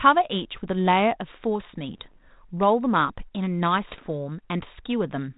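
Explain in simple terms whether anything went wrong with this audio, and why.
Bit errors on an ADPCM link crackle twice, around 1.94–2.16 s and 3.89–4.00 s: flipped bits knock the decoder off balance, leaving rough pops and brief jumps in level.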